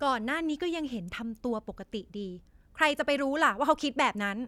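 No technical faults can be heard anywhere here.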